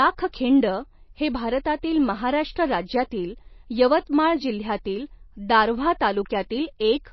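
From start to finish the speech carries plainly audible codec damage, most likely from MP3 compression. Nothing comes through above about 5.8 kHz, so the top end sounds cut off. The texture is watery or swirly: when bits run short, the encoder drops the weaker frequency lines, and they flicker in and out from frame to frame. The metallic chirps land on the s sounds, and attacks come out smeared. All of that fits a low bitrate, something like 24 kbps.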